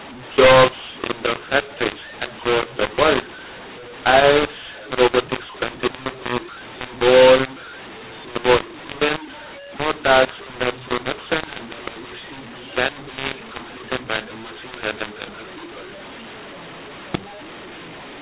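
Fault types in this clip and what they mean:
mu-law and A-law mixed up: the whole clip was coded as A-law but decoded as mu-law, so sample levels are scrambled. Speech sounds harsh, and pauses fill with noise. Waveform peaks look misshapen, silent gaps sit well above zero, and the spectrogram shows broadband hash up to 4 kHz.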